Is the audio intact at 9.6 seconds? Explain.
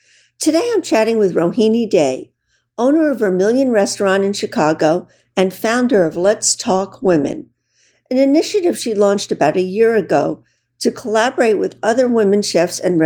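Yes, the speech at 9.6 seconds plays through without any audible fault.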